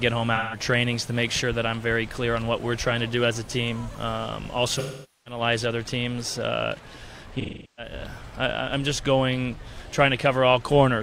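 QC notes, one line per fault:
0.35–0.59 s, 4.79–5.41 s and 7.40–7.93 s: AAC frame loss with concealment. Chunks of about 170 ms, 470 ms and 380 ms went missing. The decoder stretched the last good spectrum over each gap, giving smeared, noisy or phasey patches.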